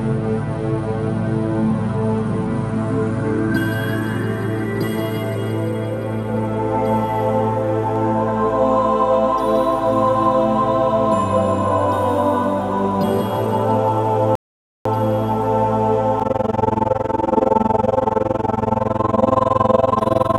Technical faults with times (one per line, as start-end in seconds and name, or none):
14.35-14.86 rebuffering stall
16.20-20.39 overlap-add ripple